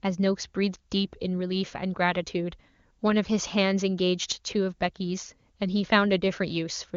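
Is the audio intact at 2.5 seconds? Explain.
Yes, the speech at 2.5 seconds is intact, carried cleanly by the AMR wideband (HD Voice) codec, which at this high rate leaves no more than faint coding damage.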